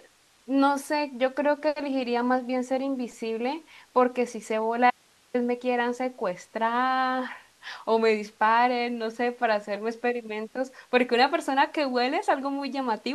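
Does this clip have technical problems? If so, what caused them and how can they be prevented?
Yes. From 4.90 to 5.34 s the speech is lost for about 440 ms. This is an audio dropout to a faint residue. The cut is abrupt, not a pause or a fade. Only hiss remains in the gap, about 35 dB below the normal level, so the path after the break stayed live. The likely cause is a brief loss of the wanted signal upstream, such as a wireless link or connection interruption. Securing cables and keeping wireless links in strong range prevents it.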